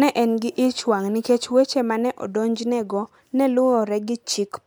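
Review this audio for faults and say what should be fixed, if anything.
Nothing stood out on listening to this speech clip, so there is nothing here that needs fixing.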